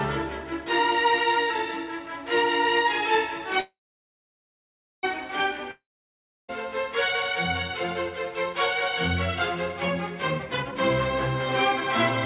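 Call audio, band-limited with nothing above 4 kHz, which fits a G.711 mu-law path at 64 kbps. It has three faults. From 3.6 to 5.05 s there is a call audio freeze: the last sound is stretched into a short decaying buzz, then about 1.29 s of silence, before playback resumes exactly where it stopped. The result is a 1.43 s gap inserted with nothing lost, likely from delayed packets draining the jitter buffer. From 5.71 to 6.50 s a long network dropout follows: a brief fading fill gives way to about 0.68 s of silence, and the audio returns about 0.78 s further on, with that stretch missing. From 10.38 to 10.78 s a jitter buffer speed-up plays the sound at 159% speed without a pitch change, as the buffer trims roughly 0.3 s of backlog by cutting pitch-period fragments, so the passage sounds hurried.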